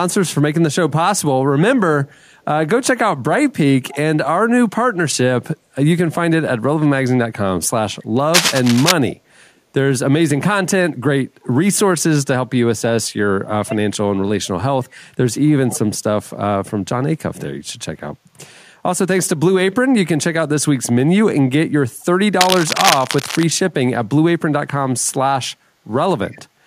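A faint, delayed copy of the speech surfaces briefly at 3.89 to 3.97 s, sitting about 20 dB below the talker and trailing it by 266 ms. This is echo leak: the far end likely plays the call over a loudspeaker, and its echo canceller let some of that pickup through, returning a scrap of the voice a quarter-second late.

From 8.34 to 8.92 s, a rough scratching burst sits over the speech at roughly the same level as the signal itself. That is cable scratch noise, likely from a worn cable, connector or control being moved so its contact resistance jumps rapidly and sprays uneven noise into the line.

The same 266 ms echo leak returns at 9.09 to 9.14 s, again about 20 dB down.

Between 13.48 and 15.03 s the speech dips, dropping by as much as 30 dB, with about a second of the stretch affected in total. This is speech suppressed in double talk. Both sides were likely talking at once, so the echo canceller could not tell its own talker from the loudspeaker echo and turned both down.

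Another echo leak at 22.01 to 22.05 s is much fainter, about 40 dB below the speech. Right after it, from 22.40 to 23.43 s, cable scratch noise rasps across the audio again, slightly below the signal level this time. A last 266 ms echo leak at 26.28 to 26.38 s sits about 30 dB down.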